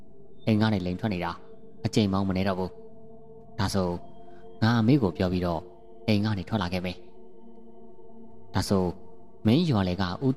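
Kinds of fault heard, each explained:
Nothing stood out on listening; no fault of any kind could be heard anywhere in the clip.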